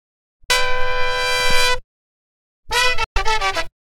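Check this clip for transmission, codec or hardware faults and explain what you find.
Two short gaps interrupt the audio, most likely Bluetooth dropouts. The first runs from 0.44 to 0.51 s and the second from 3.04 to 3.18 s. In each case the sound cuts to silence and then returns further along, as though it had kept playing underneath. That pattern fits audio packets arriving at the headphones too late and being discarded. The longer second gap suggests a run of several lost packets rather than a single one.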